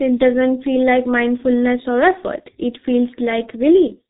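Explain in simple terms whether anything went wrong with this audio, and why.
The whole clip went through the G.723.1 codec, an old internet-phone format. Nothing above 3.8 kHz survives. The speech sounds muffled and hoarse, with smeared consonants.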